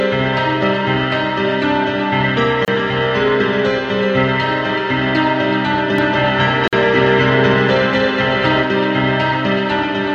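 At 2.65 s a gap at a join of encoded pieces opens, a 29 ms silence with smeared edges. The sound then resumes exactly where it stopped, from encoder delay and padding left in at the join. From 5.98 to 8.63 s a doubled audio track runs, a full-band copy about as loud trailing by roughly a fifth of a second. Unlike an echo, it has no decay or room colour and starts and stops abruptly, likely from a second, slower capture path. At 6.68 s a second gap, 49 ms long, falls four seconds after the first, matching piece-by-piece joins.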